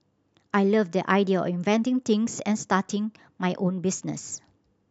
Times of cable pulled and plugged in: none

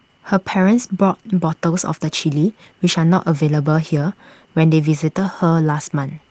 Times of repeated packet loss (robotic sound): none

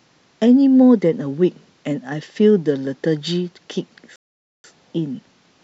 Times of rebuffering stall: 4.16-4.64

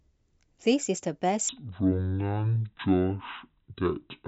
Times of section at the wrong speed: 1.49-4.28

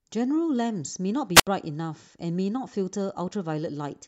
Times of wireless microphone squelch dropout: 1.35-1.47

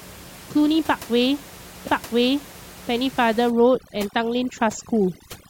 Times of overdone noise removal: 3.50-5.50

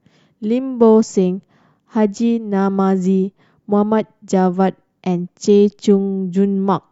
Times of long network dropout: none

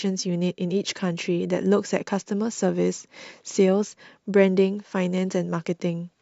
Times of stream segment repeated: none

